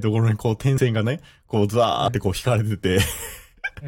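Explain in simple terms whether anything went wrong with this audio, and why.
Compressed frames skipped at 0.77 s and 2.07 s: a few 23.2 ms chunks went missing, so the speech jumps ahead.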